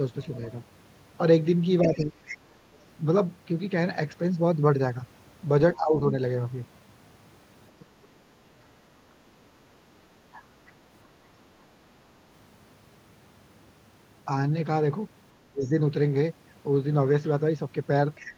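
From 0.22 to 5.76 s a second, fainter voice runs under the speech, roughly 15 dB down. This is the other side's voice leaking through, likely loudspeaker echo that the echo canceller left in the microphone signal. On a spectrogram it shows as a separate, weaker set of harmonics and formants that do not line up with the main talker's.

Between 1.81 and 2.53 s the main speech dips sharply, by around 30 dB at its deepest, for most of that stretch. This is speech suppressed in double talk: with both sides talking, the canceller likely pulled everything down. The waveform narrows abruptly, and the upper bands thin out on the spectrogram.

The same suppression returns from 5.76 to 8.86 s, again as deep as roughly 30 dB. About a second and a half of the talker is cut in chunks there, leaving gaps and dark vertical bands.

From 10.33 to 10.7 s a brief scrap of the other side's voice leaks through at a low level, roughly 25 dB under the speech. 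It appears as a faint smear of harmonics.

From 15.4 s to the end, double-talk suppression and leakage overlap. The talker drops by up to about 25 dB in short bites, while the echoed voice sits roughly 20 dB down from 15.64 to 18.32 s, forming a second harmonic track beneath the gaps.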